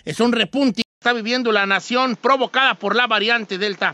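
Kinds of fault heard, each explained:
Input switched to a poorer device: at 0.82 s the speech drops out for about 200 ms and returns duller and boxier, with nothing above 7.6 kHz and a new, faint background noise well below the speech. The loudness stays roughly the same through the change, and the narrower sound persists to the end. This is likely the recording switching mid-take to a lesser microphone or headset profile with a narrower bandwidth and its own noise.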